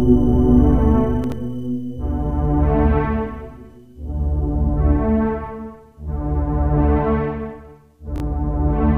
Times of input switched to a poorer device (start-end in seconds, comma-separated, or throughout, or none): none